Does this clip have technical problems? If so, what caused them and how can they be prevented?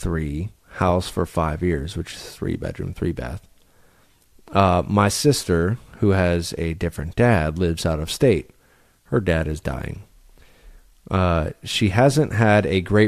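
No, no technical problems here.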